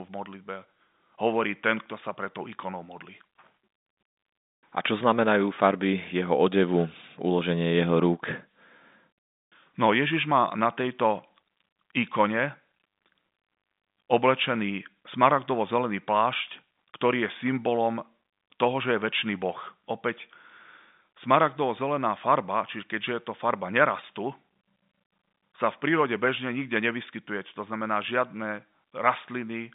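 No technical faults are audible.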